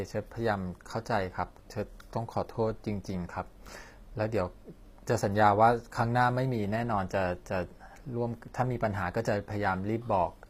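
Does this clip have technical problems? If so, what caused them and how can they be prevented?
Yes. HE-AAC compression throughout. The treble is rebuilt from lower bands, so s sounds turn gritty and lispy. Nothing sounds above 15.5 kHz. This likely reflects a low bitrate, around 24 kbps. Encode at a higher bitrate, or with plain AAC, to keep the original treble.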